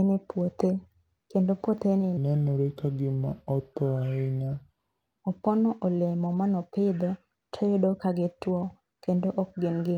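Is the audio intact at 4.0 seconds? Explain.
No. A section at the wrong speed runs from 2.17 to 5.18 s, starting just after "kendo puothe ni", and 4.0 s falls inside it. The speech there plays at 0.769 times its recorded speed, so it drags and drops to roughly five semitones lower, with pitch and tempo shifting together. The likely cause is that this stretch was played back or resampled against the wrong clock rate, slowing everything within it.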